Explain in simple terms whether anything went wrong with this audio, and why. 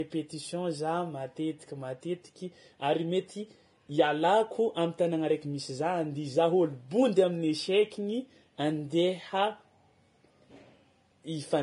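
Yes, two things went wrong. The speech sounds hissy and grainy throughout, with nothing above 10.6 kHz. This is likely Vorbis compression squeezed too hard: fine treble detail is replaced by noise. Unlike plain muffling from a filter, the top end sounds rough rather than just dull.

There are also faint, evenly spaced ticks from 0.17 s to 11.47 s, roughly every 0.4 s, around thirty in all. These are likely clock slip clicks: two devices' clocks drift apart, so single samples get dropped or repeated. Their steady rhythm sets them apart from random crackle.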